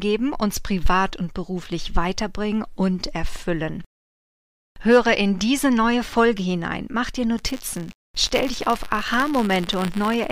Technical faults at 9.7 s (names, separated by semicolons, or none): buffer tearing